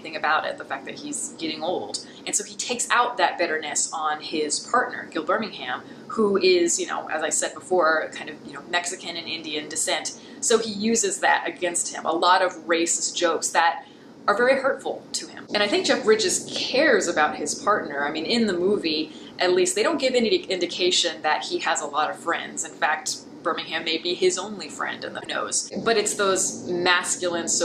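At 25.17 s a short run of the compressed stream arrives damaged, with bytes lost, zeroed or overwritten, so the decoder can no longer parse the frames it expects. It loses sync and hunts forward for the next valid frame header before decoding resumes at 25.27 s. For those roughly 95 ms the audio breaks into a brief chirp, squawk, click or short hole, the typical sound of damaged data in a compressed stream.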